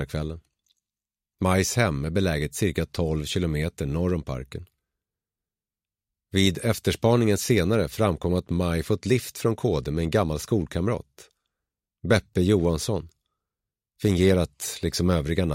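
No audible technical faults anywhere in the audio.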